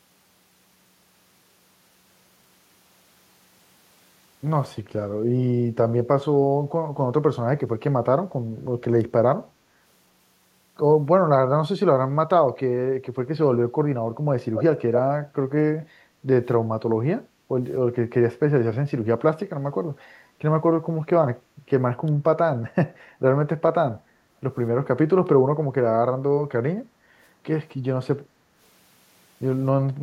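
In this speech clip, delayed copies of the talker appear in two brief scraps, at 14.54 to 14.64 s and 14.96 to 15.01 s, trailing by 256 ms at roughly 10 dB and 5 dB below the speech. This is likely echo leak from a far-end loudspeaker that the echo canceller did not fully remove. The room background also dips by about 6 dB at 17.28 to 17.48 s, 26.84 to 27.11 s, 28.27 to 28.53 s, and from 29.94 s to the end. That is background gated by the echo canceller, which pulled the microphone down while the loudspeaker played.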